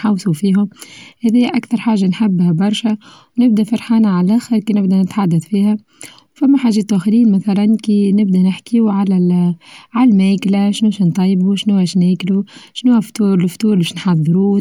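Nothing stood out as a technical fault on listening to this speech recording.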